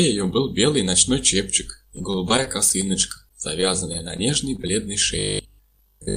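From 1.96 to 4.69 s there's repeated packet loss (robotic sound): 22 short holes, the longest 24 ms, each patched by stretching the last bit of audio, so it chops along.

From 5.19 s to the end, robotic sound from repeated short buffers sets in: a rigid 50 Hz buzz, likely from 20 ms chunks replayed over most of the stretch.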